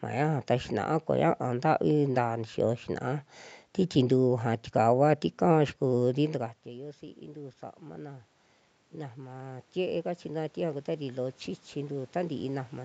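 A speech clip where the talker drops away from the mic around 6 s, and you can hear automatic gain rising to compensate: voice and room noise swell together from 6.19 to 8.35 s (about 4 dB), then again from 9.14 s to the end.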